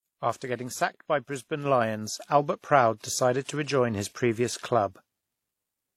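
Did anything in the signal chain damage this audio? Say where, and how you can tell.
Yes, at the codec stage, throughout the speech. Two distinct sets of compression artefacts overlap, which fits transcoding between lossy codecs, likely WMA near 64 kbit/s re-encoded as HE-AAC near 32 kbit/s. A single encode would leave one consistent artefact character, not layered ones.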